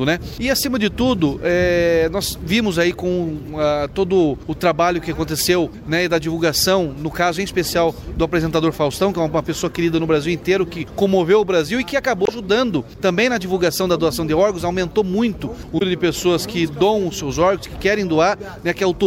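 At 12.24 s and again at 15.78 s, brief bursts of damaged data in the compressed stream, lasting about 54 ms and 44 ms, break up the sound. The decoder misreads the corrupted frames, loses sync, and hunts for the next valid frame header.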